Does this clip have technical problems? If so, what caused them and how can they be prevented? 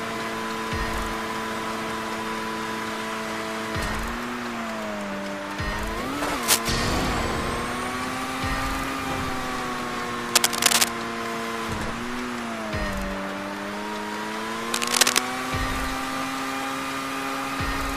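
Yes. Cable scratch noise appears three times: from 6.42 to 6.59 s, from 10.29 to 10.97 s, and from 14.74 to 15.20 s. Each time, a dense, uneven burst of scratching and rustling sits over the sound, somewhat louder than the sound itself. The likely cause is a worn cable, connector or control being moved, so that its contact resistance jumps around rapidly. To prevent it, replace worn leads and clean or replace noisy connectors and controls, and keep cables still while recording.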